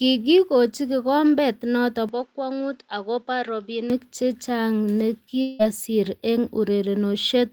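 Right after "kikombet noto", at 2.09 s, the sound goes duller and a bit quieter, around 5 dB down. This runs until 3.90 s. It's most likely an input switched to a poorer device. The new path cuts everything above about 7.6 kHz, so the top end loses its air, and its background noise sits well below the speech. There's no gap at the changeover. It simply flips to the narrower tone and flips back.

From 5.41 to 5.62 s there's a long network dropout. Roughly 0.18 s of audio never arrived, most likely lost in transit. Instead of a gap, the receiver keeps stretching the last bit of sound into a smeared, buzzy fill for that whole stretch, with no clean silence underneath. Then the speech picks up again further along, and whatever fell inside that hole is simply gone.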